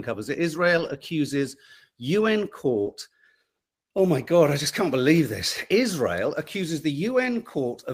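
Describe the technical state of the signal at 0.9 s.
At 0.9 s the signal is inside a lost packet rebuilt from error correction, spanning 0.77 to 0.95 s just after "covers it". Low-bitrate copies carried in the following packets filled the loss, so there's no gap, only rougher, noisier sound. A spectrogram shows smeared, grainier harmonics, while the waveform stays continuous.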